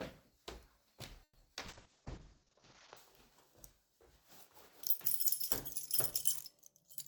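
From 1.23 to 1.38 s the last sound is drawn out for about 120 ms, then falls to silence for roughly 40 ms. It resumes where it stopped, so nothing is lost. This is most likely a call audio freeze, a stall in packet arrival rather than dropped audio.

At 1.55–1.59 s and again at 1.84–1.88 s there is short concealed packet loss: about 40 ms goes missing and only around 10 ms is patched. Each is a brief smear or wobble, and the audio jumps slightly ahead instead of pausing.

From 1.67 to 3.03 s a call bitrate drop from 96 to 7 kbps, held at its lowest for about 1.2 s, narrows the bandwidth from 20 kHz to 8 kHz. The sound turns muffled and rough.

Within that stretch, from 1.91 to 2.62 s, a jitter buffer slow-down repeats tiny pitch periods to add 72 ms. The audio plays at about 91% speed with unchanged pitch, stretched rather than stopped.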